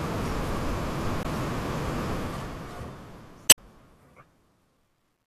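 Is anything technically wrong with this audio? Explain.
Yes, there are two kinds of fault.

Damaged data in a compressed stream occurs at 1.23–1.26 s and 3.46–3.59 s. Corrupted bytes make the decoder misread frames and lose sync while it hunts for the next header. Each event is a short chirp or blip, and the second also inserts about 32 ms of extra time.

Truncation distortion on a fade begins at 2.10 s and lasts to the end. The speech fades out from around 2 s, but the level stage discards low bits without dither, which fits roughly 11-bit resolution. From 3.19 s onward the quiet tail turns gritty.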